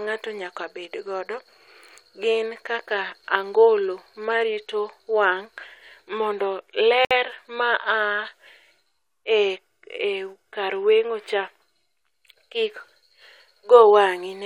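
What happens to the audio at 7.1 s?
Two separately encoded pieces of the speech were joined without trimming. The first piece's padded final frame and the second piece's leading encoder delay both remain, leaving a gap at the join of the encoded pieces. From 7.05 to 7.11 s, the speech drops out in a gap of about 59 ms. The codec smears the edges of the dropout, and the speech then resumes exactly where it broke off.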